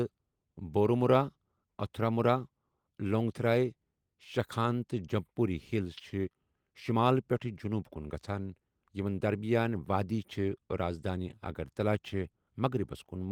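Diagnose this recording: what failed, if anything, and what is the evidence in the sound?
Nothing stood out on listening to this speech recording, so there is no failed stage to point to and no evidence of a fault to report.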